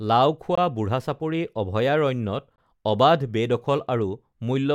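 At 0.55 s and again at 2.56 s the speech drops out for about 22 ms with hard edges. That's a gap between stream segments: the timestamps of 2-second segments don't quite meet, so the player pads with silence. Nothing's lost, just a clean hole.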